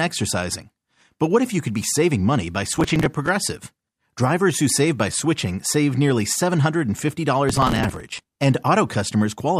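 A gritty, tearing crackle rides on the sound from 2.71 to 3.29 s and again, longer, from 7.50 to 8.35 s. This is processor overload crackle: the processor repeatedly missed its deadlines for tiny buffers, apparently around 5 ms each, and each miss replayed a hard-edged scrap of stale audio.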